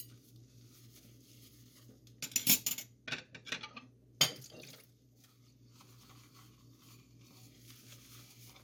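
No technical faults are audible anywhere in this recording of sounds.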